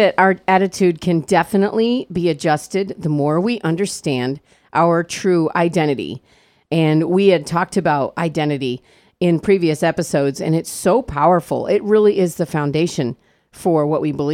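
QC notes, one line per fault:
Nothing to flag on this one; the speech comes through with no faults to note.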